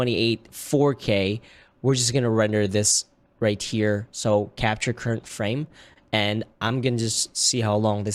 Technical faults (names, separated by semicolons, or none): repeated stalls (stutter); short stall from a late packet; jitter buffer slow-down